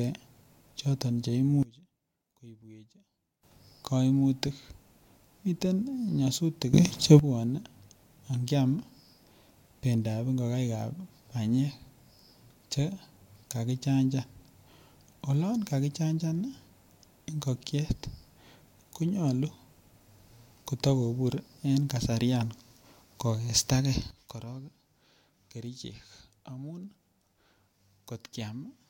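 A digital gain stage likely changed its setting instantly, without a ramp, causing a sudden gain jump three times in this speech: down about 23 dB at 1.63–3.43 s, up about 14 dB after "miten nyasutik" at 6.74–7.19 s, and down about 12 dB from 24.1 s to the end. Voice and background noise shift level together at each step.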